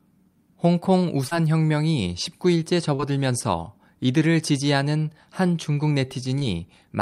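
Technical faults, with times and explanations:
1.27–1.33 s, 2.95–3.01 s and 6.39–6.43 s: short concealed packet loss. About 40, 40 and 20 ms of the call went missing, and the decoder papered over each gap by extending the preceding sound, leaving a quick smear or wobble.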